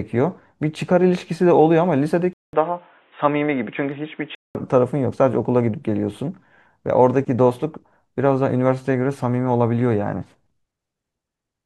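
From 2.33 s to 4.55 s the speech turns dull and boxy, with nothing above 3.8 kHz. A short gap of about 200 ms marks the switch, and a different background noise appears, roughly 40 dB below the speech, at much the same loudness. That gap and the new noise floor point to an input switched to a poorer device rather than a simple filter or codec narrowing.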